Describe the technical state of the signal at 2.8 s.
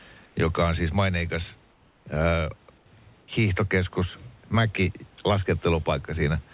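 From 2.78 to 2.86 s the room background turns into a steady, featureless hiss about 2 dB quieter. This is most likely comfort noise in place of the background: the sender paused transmission between speech, and the receiver filled the gap with synthesised noise. Unlike a dropout, the sound never goes silent. Only the background's texture flattens.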